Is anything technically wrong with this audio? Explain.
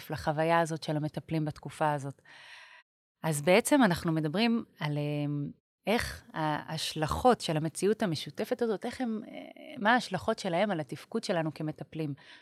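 No, nothing here points to a technical fault; the background dropping to silence between phrases and returning before the next one is deliberate gating of the pauses, and no speech is lost to it.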